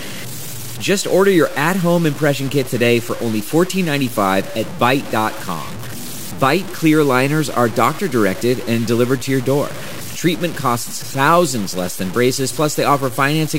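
The speech has most likely been reduced to very few bits, around five, and truncated rather than dithered, so the low bit depth without dither runs through the whole clip. Because the rounding error tracks the signal instead of being randomised, it comes through as grainy distortion that shifts with each syllable, sitting only about 15 dB below the speech. Quieter passages turn coarse and gritty, and the softest moments sputter or drop out entirely.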